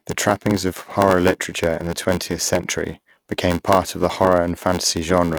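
Throughout, a block size mismatch (padded) fills the rest of each read block, which fits 512 samples, with zeros, adding an 86.1 Hz buzz and slowing the speech to 0.861 times, keeping the timbre.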